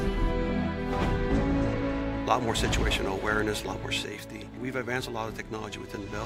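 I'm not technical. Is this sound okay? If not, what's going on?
No. At about 4.04 seconds the sound abruptly gets noticeably quieter, and it stays that way right to the end at about 6.25 seconds. This is a case of one channel dropping out: the recording has a left and a right side, and one of them likely cut off at that moment. Whatever both sides shared loses about half its strength, and anything carried only by the lost side vanishes entirely.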